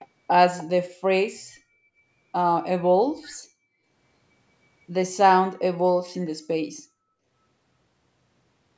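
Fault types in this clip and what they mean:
Echo leak: faint, brief scraps of the speech come back about 0.3 s late, well below the direct speech, likely a loudspeaker pickup the echo canceller missed. Unlike room reverb, it is a separate delayed copy, not a smooth decaying tail.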